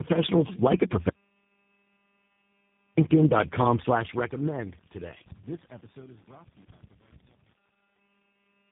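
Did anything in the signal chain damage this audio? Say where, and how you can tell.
Yes, tandem speech coding at the codec stage, audible throughout the speech. The roughness, muffling and warble are heavier than any single speech codec produces, which points to repeated decode-and-re-encode steps, likely across four low-rate codecs in a row, ending in something like G.729A. Each pass re-quantises the previous one's errors. A spectrogram shows a hard ceiling at 3.7 kHz and smeared, blotchy formant bands.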